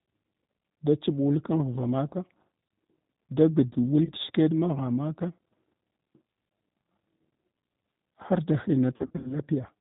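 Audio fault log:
throughout G.729A codec: the speech is carried by a low-rate coder that rebuilds it from a vocal tract filter, a pitch predictor and a few pulses per 10 ms frame, which fits an 8 kbit/s stream. Everything above 4 kHz is gone, and the sound is audibly rough, dull and slightly synthetic.
4.05 to 4.11 s VoIP packet loss concealed by the speech codec: about 20 ms of audio went missing, which fits one lost packet. The decoder filled it from its last pitch and filter, giving a brief stretched smear and a short weak stretch while the decoder recovers.
8.96 to 9.33 s VoIP packet loss concealed by the speech codec: 180 ms were lost in gaps scattered over 280 ms, none longer than 40 ms. Repeated extrapolation with falling gain turns the sound into an intermittent, fading stretched sound, and the gaps leave little time to recover in between.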